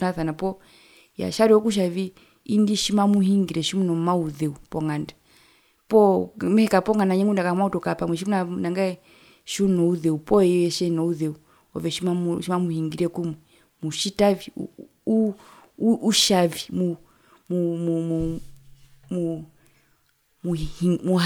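Nothing technically wrong turns up anywhere in this speech recording, so there's no fault to point to, no time to flag and no cause to explain.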